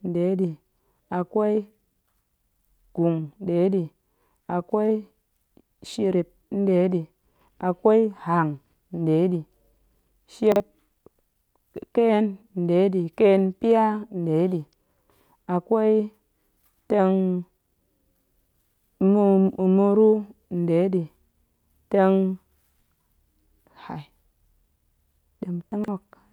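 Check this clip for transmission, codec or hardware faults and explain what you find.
Two faults of the same kind are present in this speech clip.

Chunks out of order, at 10.52–10.6 s and 25.72–25.88 s: a 40 ms piece of audio arrived late and played after audio meant to follow it, 40 ms late the first time and about 120 ms the second. Each event is heard as a brief jumbled stutter.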